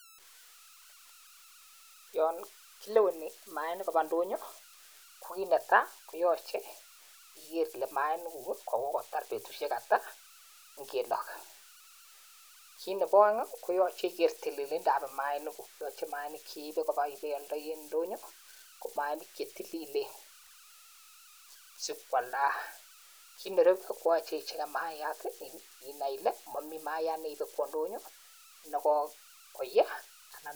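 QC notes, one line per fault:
Throughout: converter idle tones, a whistle around 1.5 kHz in pauses, about 23 dB below signal; an undithered delta-sigma converter cycling bit patterns on small input.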